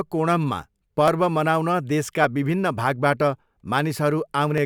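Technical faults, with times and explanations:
1.08–4.58 s, clock drift buffer slips: a short click recurs every 1.17 s, about four in all, each a tiny jump where a few dozen samples are lost or repeated. The likely cause is two devices running on clocks that disagree by roughly 500 ppm, so the buffer between them slowly drifts until a block must slip. The strictly even spacing separates this from packet loss, whose clicks and gaps fall at irregular moments.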